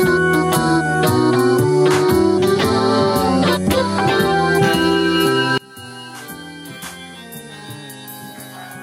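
Gain pumping runs through the whole music clip. The level swings by around 20 dB, leaving the dynamics squashed. The likely cause is input gain set far too high, with a fast limiter clamping every peak.

From 5.58 s to the end, one channel is inverted. Summed to mono, the level drops by about 33 dB and the centred content largely disappears. The likely cause is reversed polarity on one stereo channel, so the material common to both channels cancels.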